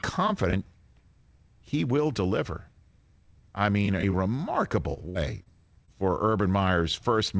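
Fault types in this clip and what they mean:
Short concealed packet loss: about 20 ms of audio never arrived in time, and the receiver filled the hole by extending the preceding sound for roughly 20 to 30 ms before blending back. It happens at 4.94, 5.43 and 5.86 s, and each sounds like a brief smear or wobble in the G.722 call audio. Unlike the burst, the flow resumes almost where it stopped, though the first lapse drops about 14 ms.
Burst of packet loss: around 5.09 to 5.17 s, some 60 ms arrives too late to play. The receiver continues the last sound for about 55 ms, turning it down as the gap lengthens, so it comes across as a short held buzz or fading hiss rather than a brief smear. When the audio picks up again it has jumped ahead, and the missing stretch is gone entirely. That longer, decaying fill and the skip tell it apart from the shorter concealments nearby.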